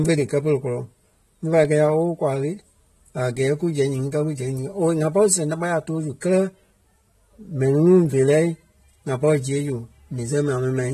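From start to finish the speech sounds dull and smeared, with the top end cut away and a warbling, fizzy texture on sustained sounds and sibilants. This is plainly audible AAC compression damage, likely from AAC-LC coding at a low bitrate; the degree of loss fits roughly 32 kbps. At that rate the encoder lowers its cut-off, leaves gaps in the spectrum and quantises each frame coarsely, which produces the swirling artefacts.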